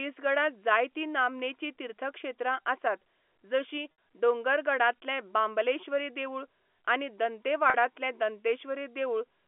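Speech over a narrowband telephone line, G.711 A-law at 64 kbps, with two dropouts showing packet loss with pitch repetition. At 3.92 to 3.98 s a 60 ms gap, and at 7.70 to 7.74 s a 40 ms gap, are filled by looping the last pitch period, giving a briefly held, buzzy tone before speech resumes. The lengths fit the loss of about three and two 20 ms packets respectively.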